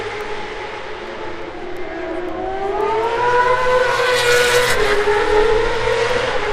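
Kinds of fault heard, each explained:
Word clock ticks: a digital link read by an unlocked receiver clock, about 100 ppm off, drops or repeats a sample roughly every 0.15 s, giving steady sharp ticks throughout.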